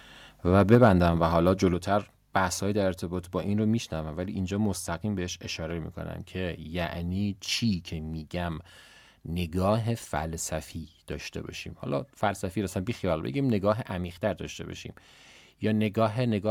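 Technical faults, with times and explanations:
0.72–0.88 s, microphone overload: the loudest syllables gain a harsh, crackling edge as their peaks, about 3 dB too hot, are flattened, likely from input gain set above the converter's limit.
0.75 s and 1.74 s, microphone volume stepped down: speech and background drop together in sudden single steps of about 3 dB, then about 5 dB, likely the call software lowering input volume after clipping. Unlike a fade, there is no gradual ramp.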